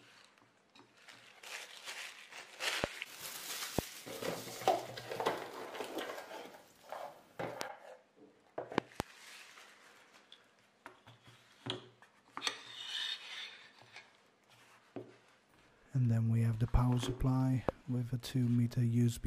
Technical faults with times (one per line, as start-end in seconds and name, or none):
2.84-2.86 loud pop
3.79-3.81 loud pop
7.61-7.63 loud pop
8.78-9.02 loud pop
17.69-17.71 loud pop